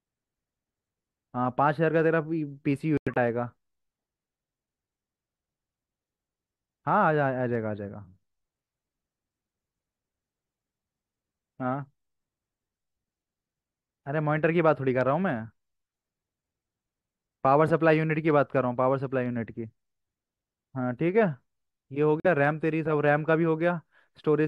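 Corrupt frames muted at 2.97 s to 3.17 s and 22.20 s to 22.26 s in this speech: damaged compressed frames were rejected by the decoder and replaced with silence. This leaves abrupt gaps of about 0.2 s and 0.06 s, with the surrounding timing intact.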